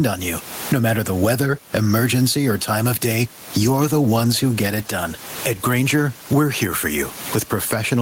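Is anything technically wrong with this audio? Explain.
Yes, two faults. Gain pumping runs through the whole clip, with a gain swing of around 20 dB; the room noise sits about 31 dB below the speech. The likely cause is input gain set far too high, with a fast limiter clamping every peak.

A call bitrate drop follows from 3.55 to 6.41 s, with the encoder falling from 32 to 18 kbps and staying at its lowest for 2.79 s. Coarser coding turns the speech rough and muffled. Unlike gain pumping, it alters timbre rather than level, and it clears once the bitrate recovers.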